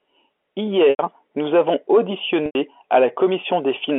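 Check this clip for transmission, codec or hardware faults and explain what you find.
Two short dropouts are audible in the speech, both the same fault; the telephone-band G.711 coding underneath, limited to roughly 300 Hz to 3.4 kHz, is not itself at fault.

Packet loss with pitch repetition, at 0.90 to 0.99 s, just before "nous avons", and at 2.46 to 2.55 s. Each gap lasts 90 ms, which fits three lost packets. The receiver filled each hole by repeating the last pitch cycle and fading it out, so the sound briefly holds with a buzzy quality, sinks toward silence, then cross-fades back into the speech.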